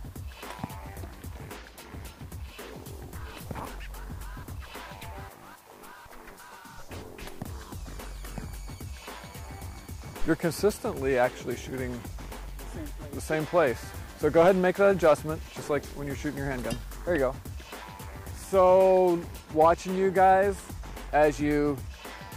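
No technical faults can be heard anywhere in this recording.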